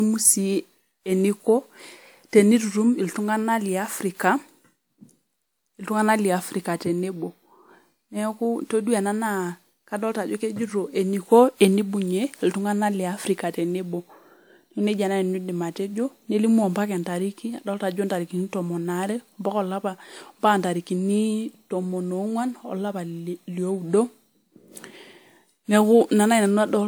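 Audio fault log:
Throughout, generation loss: the speech sounds like it was likely run through a WMA codec at 128 kbit/s about four times over, each decode and re-encode quantising again on a shifted frame grid so the errors stack rather than cancel. That leaves a swirly, hollow character and smeared consonant attacks beyond what a single 128 kbit/s pass would give, while the top end still reaches roughly 20 kHz, so the damage sits in texture rather than bandwidth.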